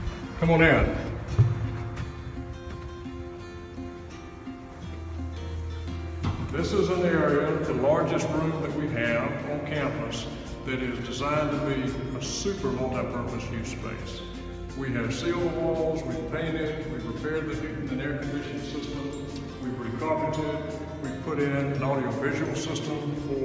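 Nothing here jumps out as a technical problem; the audio runs along without any glitches, dropouts or odd artefacts to point at.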